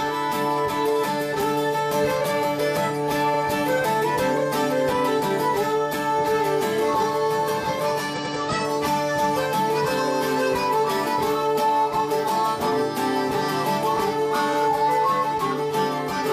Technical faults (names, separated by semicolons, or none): repeated frames